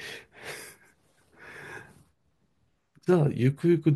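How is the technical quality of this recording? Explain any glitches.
No glitches or technical faults can be heard here.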